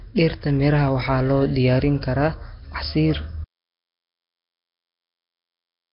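From the start the speech has a rough, hissy, underwater smear with nothing above 5.3 kHz, heavy damage that fits roughly 22 kbps Nellymoser compression as the likely cause. At 3.45 s the audio cuts to silence with no room tone through to the end, an audio dropout to silence, likely from lost input while recording continued.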